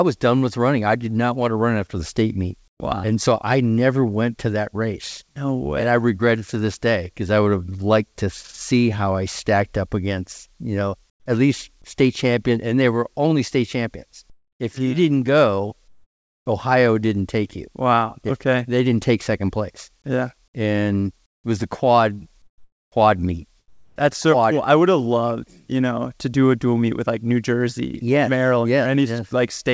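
In seven pauses, the natural room sound gives way to a flat, featureless hiss that sits about 5 to 20 dB lower than the real background. This happens at 2.68–2.80 s after "after the state meet", at 11.10–11.26 s, 14.30–14.60 s, 15.88–16.46 s after "you mm didn't go", 21.26–21.44 s just before "it was the quad", 22.42–22.92 s and 23.68–23.96 s. This is comfort noise in place of the background, likely from discontinuous transmission. The sender stopped sending during silence, and the receiver filled each gap with synthetic noise, roughly matched to the background.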